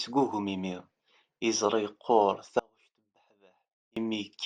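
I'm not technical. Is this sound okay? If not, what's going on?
No, not quite. From about 2.59 to 3.97 seconds, roughly 1.4 seconds, the speech suddenly drops away to a very faint sound and then snaps back just as abruptly. That's an audio dropout to a faint residue. It isn't a natural pause or a fade. The signal was most likely lost somewhere along the way while the rest of the chain kept running, so only that faint leftover got through during the gap.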